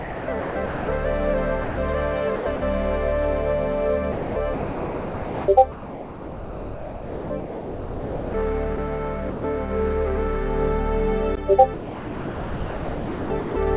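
From 0 to 0.88 s, the sender's voice detector likely switched transmission on and off, so this is sound chopped by the voice detector. The audio turns choppy.

From 1.64 to 1.78 s, the detector likely mistook the sound for background and stopped sending, so this is sound dropped by the voice detector. About 140 ms gives way to steady comfort noise before the sound returns.

The chopping recurs from 2.36 to 2.62 s, from 4.12 to 8.34 s (where about 3.7 s is replaced by comfort noise), and from 11.74 to 13.56 s.

Dropouts recur from 8.76 to 8.78 s and from 9.3 to 9.44 s.

Throughout, the call codec's coding noise is audible and nothing is heard above 4 kHz, which fits 64 kbps G.711 mu-law.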